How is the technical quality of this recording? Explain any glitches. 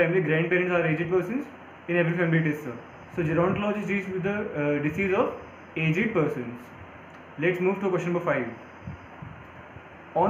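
No technical glitches turn up anywhere in this recording. The audio runs without any interruption or defect to explain.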